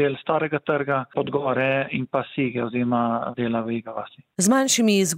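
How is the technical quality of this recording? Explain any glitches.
No audible glitches or faults.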